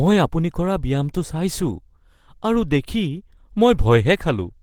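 Throughout, the speech sounds hoarse and grainy, likely Opus compression in hybrid mode near 16 kbps. A spectrogram shows smeared, noise-filled bands ending at 20.2 kHz.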